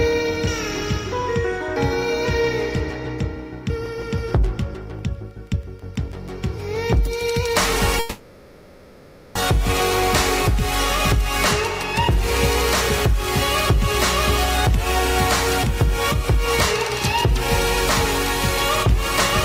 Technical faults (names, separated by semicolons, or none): long network dropout